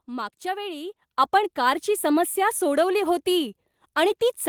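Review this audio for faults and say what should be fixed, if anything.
Microphone volume stepped up at 1.02 s and again at 4.08 s. At each point the voice and the background noise beneath it get louder together, by about 7 dB at the first step and about 2 dB at the second. The call software judged the input too quiet and raised the device's input volume in a single jump rather than ramping it, so the level change happens instantly. To prevent it, disable the software's automatic microphone level adjustment and set a fixed, adequate input gain before recording.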